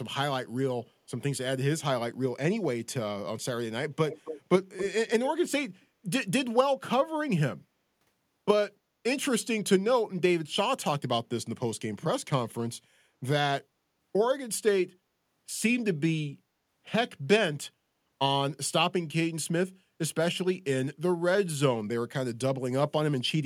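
A delayed copy of the speech trails it by about 276 ms at 4.1–4.41, 4.77–4.89, 5.08–5.29 and 5.81–5.86 s, starting about 10 dB down and fading to near silence. This echo leak is likely a far-end loudspeaker whose echo canceller let some speech through.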